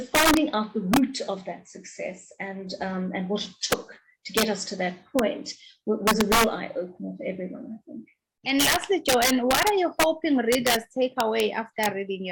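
Integer overflow runs through the whole clip: loud peaks pushed about 4 dB past full scale wrap around to the opposite sign instead of being limited, so a small fraction of samples, around half a percent, snaps across the full range and produces violent cracks far harsher than ordinary clipping. Clock drift between sender and receiver is also present throughout, with the sender's clock running roughly one and a half percent slow, so the receiver's jitter buffer keeps draining and must be topped up to avoid running empty. Repeated timing corrections follow from this between 0.56 s and 12.13 s, where the receiver keeps repeating short pieces so the audio plays at about 99% speed, adding roughly 150 ms in total through small, unevenly spaced hiccups.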